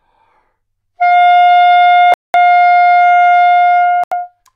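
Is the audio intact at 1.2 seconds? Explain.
Yes, the audio is intact at 1.2 seconds, with no dropout, click, distortion or other fault at that moment.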